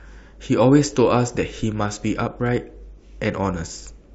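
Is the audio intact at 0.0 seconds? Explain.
Yes, at 0.0 seconds the speech plays through intact, with no dropout, click, distortion or other fault audible at that moment.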